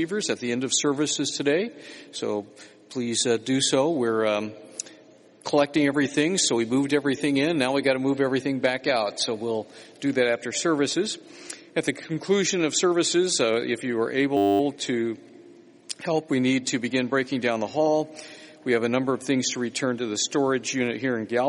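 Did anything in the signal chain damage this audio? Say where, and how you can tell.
Yes, a system hang loop at the driver/buffer stage: from 14.37 to 14.6 s, one 10 ms slice repeats 23 times, giving a steady 100 Hz buzz rather than the silence of a dropout.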